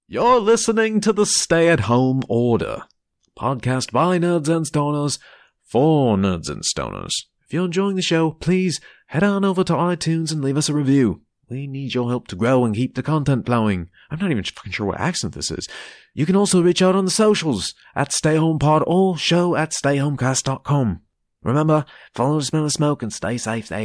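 No technical faults can be heard anywhere in the speech recording; the signal holds steady throughout with no audible interruptions or defects.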